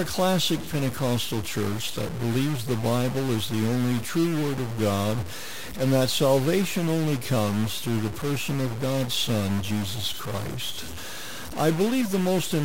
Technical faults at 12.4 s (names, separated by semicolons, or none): stuck bit